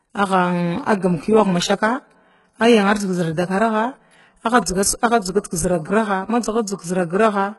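From start to finish the speech carries heavy damage, likely from HE-AAC compression. Nothing is left above 11.5 kHz. The treble is rebuilt from copied lower bands, so s sounds turn gritty and metallic. The damage fits a very low bitrate near 12 kbps.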